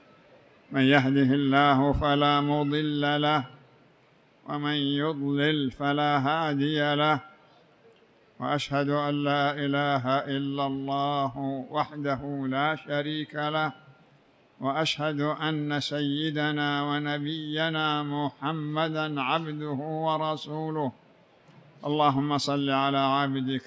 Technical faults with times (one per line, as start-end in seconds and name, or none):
none